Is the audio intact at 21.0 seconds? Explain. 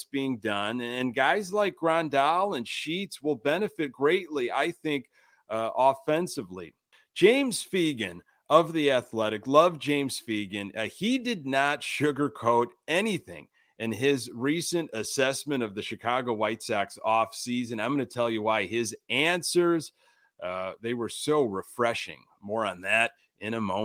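Yes, at 21.0 seconds the speech is intact, with no dropout, click, distortion or other fault audible at that moment.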